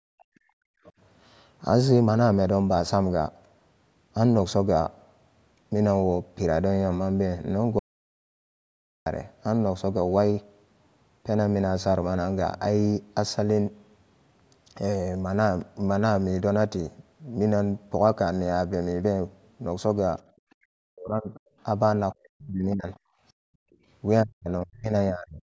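From the very start to 0.79 s the talker's speech sinks and breaks up, falling by roughly 40 dB over about 0.7 s in total. This is speech suppressed in double talk: with both sides talking at once, the echo canceller likely mistook the talker for loudspeaker echo and turned everything down. Just after, at 0.86 to 0.91 s, a faint scrap of a second voice slips through, about 30 dB below the talker. This is the other side's voice leaking through, likely residual echo that the canceller left in the microphone signal.

From 7.79 to 9.06 s the sound stops dead for 1.27 s. The gap is total silence with no room tone, and then the audio resumes mid-flow. This audio dropout to silence likely comes from the input being lost, through a dropped link or a stray mute, while the recorder kept writing silence.

At 20.24 to 20.36 s the background room sound ducks by about 17 dB for roughly 100 ms, then returns. 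That is background gated by the echo canceller, which clamped the microphone hard while the loudspeaker played. From 20.52 to 23.75 s the other side's voice leaks through again, now for a longer stretch, sitting about 25 dB under the talker. Overlapping it from 20.64 to 22.89 s, the talker is again suppressed in double talk, cut by roughly 40 dB for about 1.5 s altogether. From 23.17 to 23.79 s the background is gated once more, dropping by about 39 dB over roughly 0.5 s. From 24.23 to 25.41 s the talker's speech dips in pieces again, by roughly 40 dB over about 1 s in total. This final double-talk suppression runs nearly to the end of the clip. Throughout, the call microphone processing keeps the band below 8 kHz, which is expected for this kind of path.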